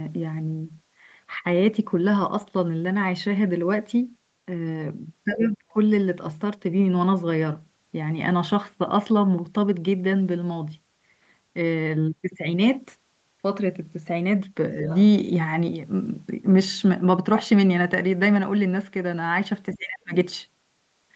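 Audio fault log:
5.35–5.77 s and 19.74–20.14 s, speech suppressed in double talk: the far end was likely talking at the same moment, and the echo canceller, unable to tell the local talker from the loudspeaker echo, pulled the whole microphone signal down. Each time the speech sinks for roughly 0.4 s, by about 25 dB in the first instance and about 30 dB in the second, so it briefly falls away and then returns.
14.85–14.98 s, other side's voice leaking through: a short scrap of the far-end voice, likely loudspeaker echo that the echo canceller failed to remove from the microphone, comes through for about 0.13 s. It sits about 15 dB below the local speech, quiet but audible as a second voice, and it is band-limited to under 8 kHz like the rest of the call audio.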